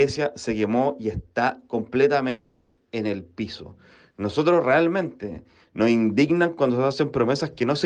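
From 2.29 to 2.79 s, the audio stops arriving. The last sound is stretched into a fading buzz that fills the whole gap. No silence follows. This is likely a long network dropout. About 0.48 s is lost, and playback resumes past it.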